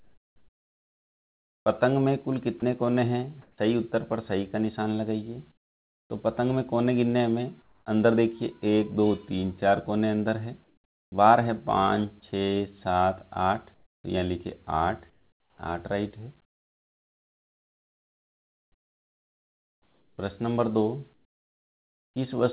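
From 0 to 3.58 s the sound is chopped by the voice detector. It switches in and out, and about 1.84 s in total is replaced by synthetic fill, so quiet edges vanish and the background flickers between real and artificial. The likely cause is a sender-side voice activity detector gating transmission repeatedly, with the receiver inserting comfort noise in the gaps. Throughout, nothing reaches above 4 kHz, which fits a G.711 mu-law call path.

At 5.52 to 6.10 s there is comfort noise in place of the background. The textured ambience gives way to a flat, featureless hiss about 9 dB quieter. The likely cause is discontinuous transmission: the sender stopped sending during a lull and the receiver synthesised noise roughly matching the background spectrum. The same substitution recurs at 7.62 to 7.86 s, with the level dropping about 8 dB, and at 10.64 to 11.12 s, dropping about 4 dB. Each time, the steady fill likely stands in for untransmitted background.

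At 11.1 s the onset is clipped by the voice detector. The returning sound starts abruptly, missing roughly its first 20 ms, because the detector was likely slow to register activity and that opening was covered by comfort noise.

From 13.74 to 22.16 s comfort noise again replaces the background, covering about 5.6 s in total. The real ambience is swapped for uniform synthetic noise, likely because transmission was suspended through the quiet stretches.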